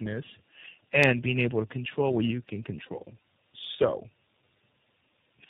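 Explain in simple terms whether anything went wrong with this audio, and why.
Something did go wrong, and it runs through the whole clip: tandem speech coding. The call seems to have crossed several networks, passing through two different speech codecs in a row, which sounds like AMR-NB and then iLBC, with a plain telephone link between them. Each codec squeezed audio the previous one had already damaged, so the speech comes out rough, muffled and warbly, and nothing above about 3.7 kHz survives.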